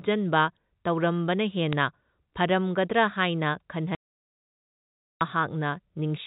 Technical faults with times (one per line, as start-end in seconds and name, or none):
1.73 bit errors on a digital phone line
3.95-5.21 audio dropout to silence